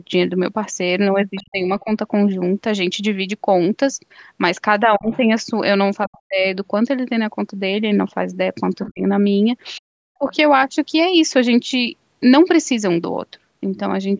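From 1.35 to 1.47 s, a faint second voice leaks through, about 25 dB under the talker. It is the other side's voice leaking through. The likely cause is an echo canceller that left part of the loudspeaker signal in the microphone. The same faint leak returns from 4.95 to 5.18 s, and very quietly from 6.12 to 6.17 s. At 8.83 to 8.91 s it is louder, only about 15 dB down.

Each leak comes with speech suppressed in double talk. With both sides talking, the canceller likely turns the talker down too. From 1.37 to 1.9 s the voice drops deeply, by roughly 40 dB. From 4.97 to 5.11 s the dip is milder. From 6.06 to 6.43 s it is deep again. Between 8.91 and 10.26 s the voice drops by roughly 40 dB in places.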